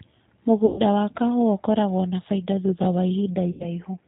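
Speech, passed through the G.729 codec throughout. The damage is plainly audible. Nothing above 4 kHz survives, and the voice sounds rough and slightly synthetic. That fits the 8 kbit/s rate, rebuilt from a vocal tract filter and a few pulses per frame. VoIP packet loss concealed by the speech codec appears twice, from 0.66 to 0.81 s and from 3.51 to 3.66 s. About 120 ms and then 90 ms of audio went missing, consistent with four and three lost packets. The decoder stretches the last sound into a buzzy tone or a coloured noise that fades. The voice stays weak briefly as the decoder recovers.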